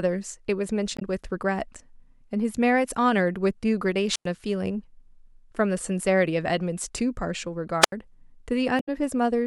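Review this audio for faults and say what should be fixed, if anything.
Damaged data in a compressed stream at 0.96–1.02 s and 8.77–8.89 s: corrupt frames make the decoder lose sync, producing a broadband smear on the spectrogram. Check stream integrity or re-fetch the source file.

Wireless microphone squelch dropout at 4.11–4.26 s and 7.81–7.92 s: RF fades, hiss rises, then the receiver mutes for about 99 ms and 80 ms, leaving flat waveform gaps. Improve antenna placement or line of sight.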